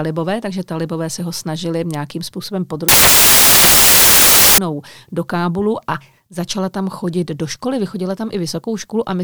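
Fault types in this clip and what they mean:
samples built from the wrong bytes: From 2.89 s to 4.58 s, just after "ho snažili nějakým způsobem", the speech is replaced by loud, harsh broadband noise. The bytes making up each sample have been assembled incorrectly, through a one-byte offset, reversed byte order or a wrong alignment assumption. This promotes the rapidly fluctuating low-order bits to the most significant position, so every value becomes essentially random.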